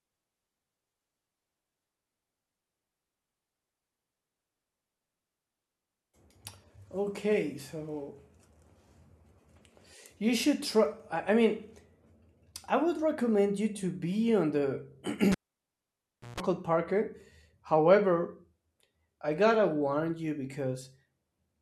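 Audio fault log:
15.32–16.40 s, cable pulled and plugged in: a pop, then about a second of near silence with the speech gone while the lead is out, a short burst of 60 Hz mains buzz, about 150 ms, as the plug's tip touches first, then another pop as the speech comes back.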